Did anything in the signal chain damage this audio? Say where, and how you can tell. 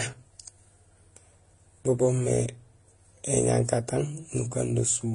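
Yes, at the codec stage, throughout the speech: nothing sounds above 10.6 kHz, and the artefacts of different codecs are layered at once. That points to transcoding between lossy codecs, likely Vorbis then HE-AAC then AAC-LC near 30 to 40 kbit/s. A single encode would leave one consistent artefact character.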